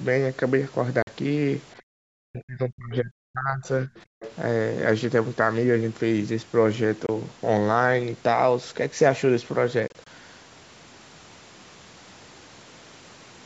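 At 1.02 to 1.07 s, audio packets likely failed to reach the Bluetooth headphones in time and were discarded. This Bluetooth dropout blanks about 46 ms of sound, which fits two lost packets of roughly 23 ms each. The gap has hard or very briefly faded edges. The sound then picks up further along, as if it had kept playing underneath.

From 1.77 to 1.82 s, the other side's voice leaks through. The far end was likely playing from a loudspeaker, and the echo canceller left some of it in the microphone signal. This short scrap sits very low, about 35 dB below the speech.

Between 2.1 and 3.91 s, both sides were talking at once. The canceller likely could not tell the near talker from the loudspeaker echo, so it turned both down. This is speech suppressed in double talk. The voice dips over roughly a second and a half in total, at worst by about 40 dB.

At 4.2 to 4.32 s, the other side's voice leaks through again, likely from the same uncancelled echo. 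This time it is much more audible, about 15 dB under the speech.

At 7.06 to 7.09 s, a single Bluetooth dropout, likely one lost packet, cuts about 23 ms. From 9.88 to 10.07 s, three such holes, likely from dropped packets, are scattered over about 190 ms. Together they remove about 70 ms, and none runs longer than about 23 ms.

The call microphone processing band-limits everything to 8 kHz.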